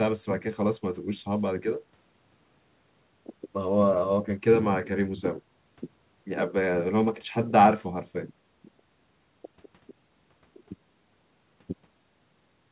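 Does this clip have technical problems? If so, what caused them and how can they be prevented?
No, this clip has no technical problems, so there is nothing to prevent.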